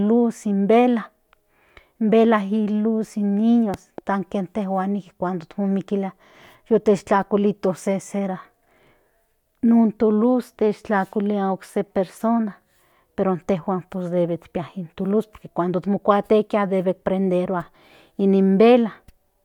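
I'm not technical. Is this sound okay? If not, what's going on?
No, not quite. At about 3.74 seconds there's a loud pop, actually two sharp thumps close together, over by roughly 4.0 seconds, while the speech keeps going underneath. That's likely a sudden electrical jolt, such as a plug, switch or static spark, getting into the signal.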